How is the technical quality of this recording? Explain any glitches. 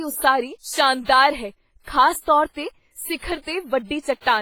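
The speech has heavy coding damage throughout, most likely from WMA compression at a bitrate that sounds close to 24 kbps. A transform codec this starved spreads quantisation noise across long blocks and drops weak spectral detail, leaving ringing, washy consonants and a hiss that breathes with the speech.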